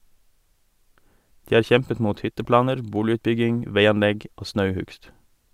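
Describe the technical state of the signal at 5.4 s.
At 5.4 s the speech signal is intact, with no audible fault at that moment.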